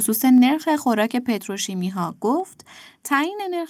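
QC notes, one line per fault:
0.25–0.45 s, microphone overload: the loudest syllables here carry a harsh, crackly edge, as their peaks run about 1 dB past full scale and get flattened at the converter's ceiling, with only a small fraction of samples affected. The squared-off tops add a burst of upper harmonics that the ear hears as grit on the peaks. The likely cause is an input volume set too high, so the signal reaches the converter already at its limit.
0.38 s, 1.38 s, 2.40 s, 3.42 s, microphone volume stepped down: at each of these points the speech and the background beneath it fall together in one abrupt step, by about 2, 3, 2 and 2 dB. The first drop comes during the distorted stretch. The regular one-second spacing and the single-step shape of each drop likely point to the call software lowering the device's input volume after it detected overload.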